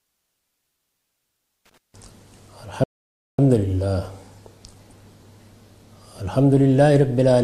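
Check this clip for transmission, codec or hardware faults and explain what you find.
Two faults stand out, one hardware and one transmission, with no codec fault apparent.

From 1.66 to 1.78 s there is loose connector crackle: a worn contact making and breaking chops the signal into irregular scratchy bursts, unlike the regular, even ticks of clock-sync errors.

From 2.84 to 3.39 s a rebuffering stall drops to silence while the player waits for data. The sound then resumes seamlessly, adding 0.55 s. A dropout would instead skip ahead.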